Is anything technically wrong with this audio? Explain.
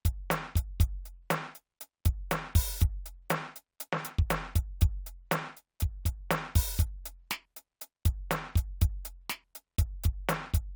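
No, nothing in this music stood out as technically wrong on listening.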